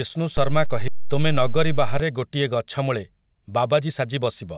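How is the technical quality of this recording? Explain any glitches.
The recording has three distinct glitches within its first four and a half seconds, all heard through a narrowband call path that carries nothing above 4 kHz, which fits a G.711-type telephone codec.

The DC step begins at 0.37 s, when the waveform's zero line suddenly shifts, and it lasts until 2.00 s. The jump gives a brief low thump or click while the speech carries on unchanged. Unlike a dropout or a click from lost data, nothing is missing. Only the baseline moves.

The skip ahead happens at 0.88 s, during the offset stretch. With audio already queued behind it, a chunk of speech, roughly 0.7 s, was discarded and playback jumped forward with no gap or filler. The two sides are butted together, so the speech lurches abruptly. What sets it apart from a dropout is that there is no silence or concealment noise, just a missing piece.

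The jitter buffer speed-up runs from 2.80 s to 4.43 s. The receiver was holding more buffered audio than it wanted, so it trimmed short pitch-period slices over and over to catch up, removing roughly 150 ms in total. The speech plays about 8% faster and sounds hurried, but its pitch stays the same. That unchanged pitch distinguishes it from a sample-rate or playback-speed error, which would raise the pitch along with the tempo.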